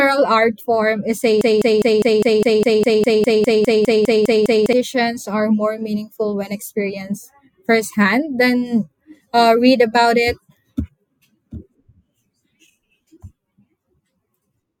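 A speech clip with a broken-record loop. Just after "art form is", at 1.41 s, a fragment of about 0.2 s starts repeating exactly, back to back. It repeats 16 times and stops at 4.73 s, where "are more meaningful when" follows. The likely cause is a stalled player, encoder or stream that kept resending the last fragment it held. Whatever speech belonged in those three seconds is gone.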